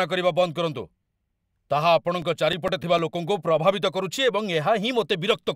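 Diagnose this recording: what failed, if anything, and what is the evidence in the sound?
The failure is at playback from storage: CD scratch ticks. Between 2.22 and 3.14 s, seven short ticks, the longest a few milliseconds, recur at a steady rate of roughly eight a second as damage on the disc passes under the laser once per revolution. Error correction cannot rebuild those samples, so the player conceals them. Random vinyl clicks or buffer dropouts would not hold this regular, rotation-locked spacing.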